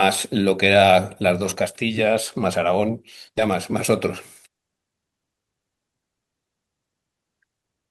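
A skip ahead occurs at 3.37 to 3.39 s in this speech. Around 0.7 s of audio was discarded, either in transit or by a jitter buffer that overflowed and dropped queued audio to catch up, so playback jumped straight to later material and the delay shrank by about the same amount. Nothing fills the join: the speech before and after is butted together directly, producing an abrupt jump forward where part of the utterance simply vanishes.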